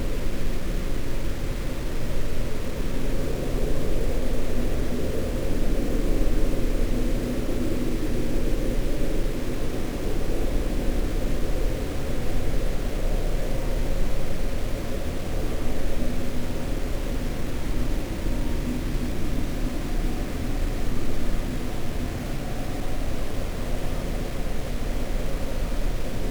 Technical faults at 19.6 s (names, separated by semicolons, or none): low bit depth without dither